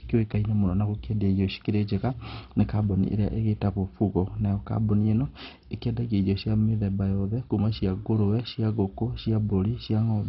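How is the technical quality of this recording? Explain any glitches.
The technical quality is poor. The speech is dull and gritty from start to finish. Throughout, the sound is likely affected by MP2 compression at a very low bitrate. Starved upper sub-bands switch off, leaving nothing above 5.6 kHz, so the spectrogram shows a hard ceiling with flickering patches, and the remaining bands gurgle granularly.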